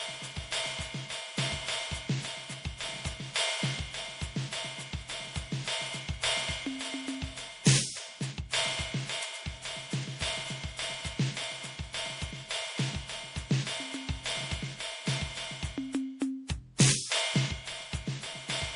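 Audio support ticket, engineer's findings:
Generation loss, throughout the music. Swirly, smeared, hollow texture, heavier than a single low-bitrate MP3 would give; transients blurred, attacks soft. Likely repeated MP3 decode/re-encode, around seven passes, consistent with roughly 64 kbit/s each time. Every pass re-quantises on a shifted frame grid, so noise and spectral holes accumulate rather than staying fixed.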